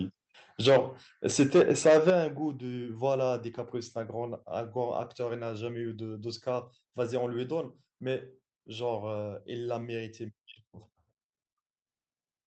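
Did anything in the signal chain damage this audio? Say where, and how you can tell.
Yes. The damage starts at the converter. From 0.65 to 0.77 s and from 1.39 to 2.1 s, the loudest peaks turn harsh and crackly. This is microphone overload, likely from input gain set too high. Peaks ran about 10 dB, then about 7 dB, past full scale, so their tops were sliced flat.

Call processing then reacted. The microphone volume stepped down by about 2 dB at 0.69 s and by about 8 dB at 2.1 s. Voice and background drop together in one jump, each time during or right after a clipped stretch. That pattern likely points to automatic gain control.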